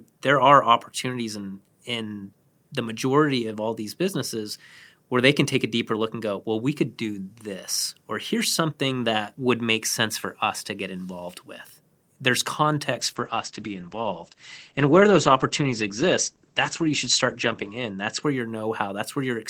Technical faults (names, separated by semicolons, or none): call bitrate drop